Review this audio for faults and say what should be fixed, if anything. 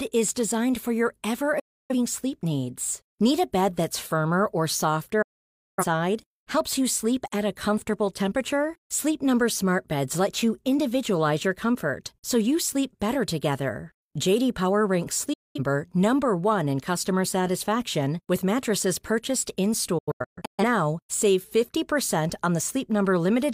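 The receiver repeatedly lost the digital signal or rejected frames that failed their checks, so it muted with a quick 8 ms fade each time until clean frames resumed. That produces digital broadcast dropouts: at 1.59 s (after "designed for your ever", back at "sleep needs"), 5.22 s (after "bed that's firmer or", over half a second gone), 15.33 s, and 19.98 s (after "satisfaction with mattresses purchased"), where short holes of up to 0.13 s scatter across 0.6 s before "now save". The missing audio is gone for good. To prevent this, improve reception margin with better antenna placement and signal strength.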